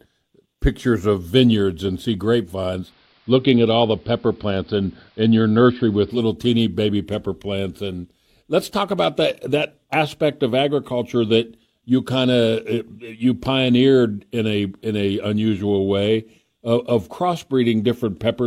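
From 2.79 s to 6.23 s the speech shows digital radio blending to analogue: the receiver lost its digital stream and cross-faded over 129 ms to the AM broadcast. Level shifts about 1 dB, and faint hiss sits well below the signal.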